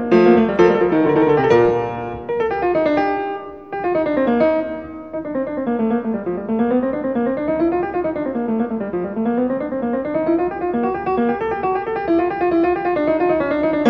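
At 1.65 s the audio has a DC step: the waveform's zero line suddenly shifts by about -30 dBFS, as happens when a converter recalibrates or an input carrying an offset is switched into the path. The jump is heard as a single low thump while the sound itself continues unchanged. The offset then drains away rather than holding, following a high-pass response at about 5 Hz, so the baseline settles back toward zero over a fraction of a second.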